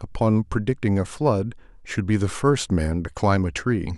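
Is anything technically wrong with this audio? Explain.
No, nothing is technically wrong with this audio. No fault can be heard anywhere in this speech recording.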